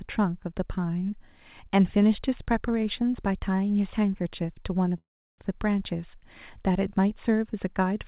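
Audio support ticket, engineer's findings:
Call audio freeze, 4.98 to 5.40 s: sound stalls, short fading buzz then about 350 ms of near silence, resumes where it stopped with nothing lost. Likely a jitter buffer underrun from delayed packets; playback now runs about 400 ms later. Band-limited call audio, nothing above 4 kHz.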